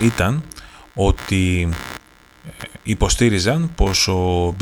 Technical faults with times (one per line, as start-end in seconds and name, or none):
0.00-4.61 computer activity noise